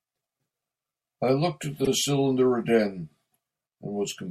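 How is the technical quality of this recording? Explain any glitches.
There is one glitch, a case of repeated frames at 1.84 to 1.89 s. A 48 ms stretch of compressed speech plays twice, which fits two codec frames being written out again, so the sound stutters and runs 48 ms longer. Unlike a dropout, nothing is lost; the same fragment simply recurs.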